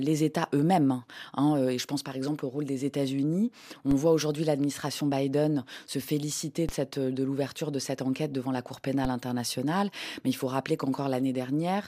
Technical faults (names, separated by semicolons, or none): DC step